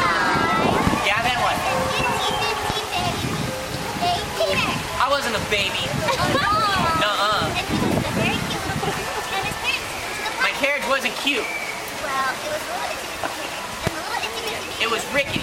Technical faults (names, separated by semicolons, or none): loud pop